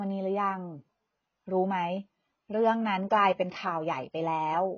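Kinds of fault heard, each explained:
AAC compression: The speech sounds dull and smeared, with nothing above 6.5 kHz. The likely cause is heavy AAC-LC coding, which fits about 16 kbps.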